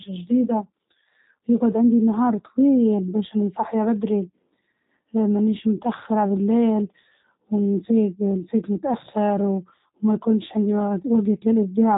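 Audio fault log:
throughout: G.729 codec. The speech is rebuilt rather than carried: each 10 ms frame is reduced to a vocal tract filter shape, a pitch estimate and a few pulses of excitation, which fits an 8 kbit/s low-rate speech codec of the G.729A kind. Nothing above 3.8 kHz survives, so the sound is narrow and telephone-like. The coarse pulse excitation makes the damage plainly audible, giving the speech a rough, buzzy, synthetic edge.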